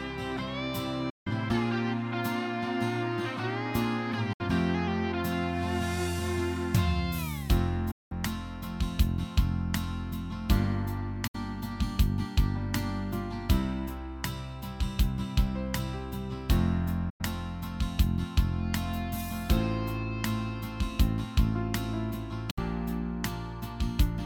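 Digital broadcast dropouts at 1.10, 4.33, 7.91, 11.27, 17.10 and 22.50 s: the receiver mutes on failed frames with an 8 ms fade, leaving silent holes of 64 to 192 ms. All are multiples of 32 ms, pointing to 32 ms frames. Unlike concealed packet loss, nothing is repeated or smeared. The audio simply vanishes.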